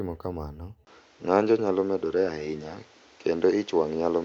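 This is a speech clip. At 0.85 s the sound changes character and stays that way to the end. A gap of about 20 ms marks the change. After it, nothing is heard above 7.6 kHz, so the sound turns duller and boxier. The level shifts by about 5 dB. A new background noise appears, around 30 dB below the speech. The likely cause is an input switched to a poorer device partway through the recording.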